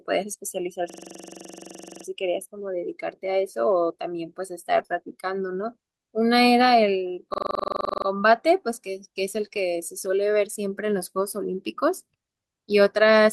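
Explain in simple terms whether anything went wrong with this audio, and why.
Twice the sound gets stuck and chatters like a machine gun: from 0.90 to 2.05 s, and again from 7.34 to 8.06 s. A tiny 43 ms scrap of audio repeats about 23 times a second, 27 times in the first stretch and 17 in the second. This is a system hang loop. The computer or its audio driver froze, but the sound hardware kept replaying the same small chunk of memory, which fits a 2048-sample buffer, until the system recovered.

Five short moments sound rough and grainy, with no gap: 4.79 to 4.81 s, 4.91 to 4.97 s, 9.36 to 9.46 s, 9.52 to 9.62 s, and 11.40 to 11.42 s. Each is a lost packet rebuilt from error correction. Pieces of the call went missing in transit, but the next piece carried a cheaper backup copy, so the receiver played that instead. The rebuilt stretches last between 20 and 60 ms.

In between those spots there are brief smeared or wobbly blips, from 4.83 to 4.86 s, 4.86 to 4.91 s, and 9.48 to 9.52 s. 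These are short concealed packet loss. No backup copy arrived for those moments, so the receiver guessed. It stretched out the last sound it had for about 16 to 30 ms, then blended back into the real audio. That guesswork is what makes the sound briefly waver.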